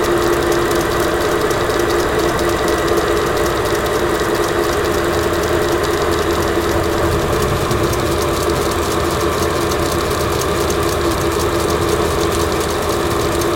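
From the start to the end of the clip, every sound arrives twice. This is a doubled audio track. A second, full-band copy trails the first by roughly a third of a second. It is about as loud as the original. Nothing decays between the two, and there is no room colour on the repeat. It is a clean, flat duplicate, so each event stutters. The likely cause is the same audio being captured again through a slower path and mixed back in.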